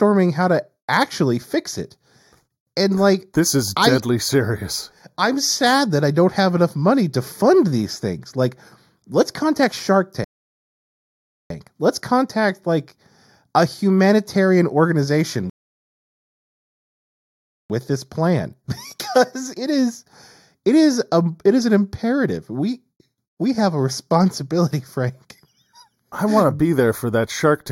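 One channel of the speech reaches the mono sum a fraction of a millisecond late, around 0.2 ms, so shared content cancels at evenly spaced frequencies starting near 3 kHz. This channel delay produces comb filtering throughout, a hollow, phasey colour with fixed notches.

At 10.24 s the player runs out of buffered audio, a rebuffering stall, and the speech drops to silence until 11.50 s, then resumes exactly where it stopped, adding 1.26 s. A second stall follows "like a humanitarian organization" at 15.50 s, holding silence until 17.70 s (2.20 s added) before continuing with "with this plan".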